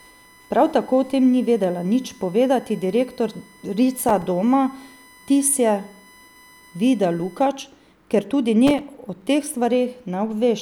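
A speech recording carries a steady high whine from 0.0 to 7.43 s, a 1 kHz tone strongest at its 2 kHz harmonic and roughly 30 dB below the voice. This is USB whine, from bus frame current leaking into the power or ground. Gritty bursts of processor overload crackle tear through the speech from 3.98 to 4.22 s and from 8.67 to 9.27 s. There the overloaded processor missed a run of buffers of a few milliseconds each, leaving hard-edged silent gaps.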